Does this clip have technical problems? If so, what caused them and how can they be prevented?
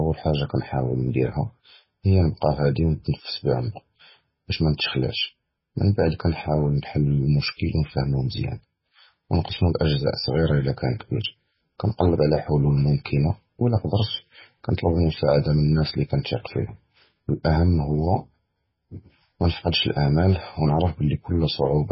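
Yes. MP3 compression damage runs through the whole speech clip, most likely from encoding at a very low bitrate; the heavy degradation fits something around 16 kbps. Nothing is heard above about 5.6 kHz, so the treble is gone and s sounds turn dull. With so few bits, the encoder drops weak frequency components that flicker in and out between frames, giving a watery, swirling texture and smeared consonant attacks. To prevent it, encode at 128 kbps or higher, or keep a lossless master.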